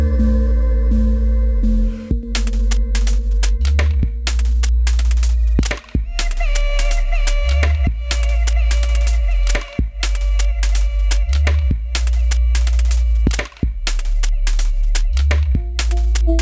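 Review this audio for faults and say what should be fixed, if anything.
Aliasing runs through the whole clip. High content above 8 kHz was never filtered out and folds back down as gritty, metallic tones, roughly 20 dB below the signal, which fits a drop to a 16 kHz rate. On a spectrogram, energy runs hard up to 8 kHz with mirrored, unrelated streaks beneath. To prevent it, apply a steep low-pass filter below 8 kHz before resampling, or use a resampler with proper anti-aliasing.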